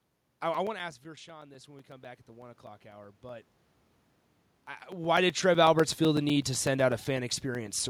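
A steady ticking runs through this speech recording from 0.17 s to 7.80 s, a small click every 0.125 s, eight per second, heard only while there is signal. These are periodic USB or driver dropouts: at each tick something stalls the bus or driver and about 4 ms of audio is lost and replaced with silence, around seventy times in all. Between 1.02 s and 3.52 s the voice and the room noise swell together, rising by about 5 dB over two and a half seconds. That is automatic gain rising: after the input fell by about 17 dB, as when the talker leans away from the microphone, the gain control slowly raised its gain to compensate.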